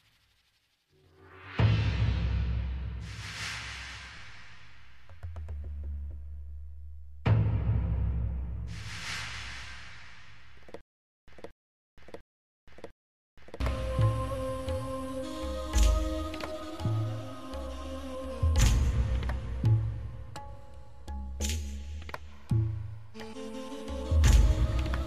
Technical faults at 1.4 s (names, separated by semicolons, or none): none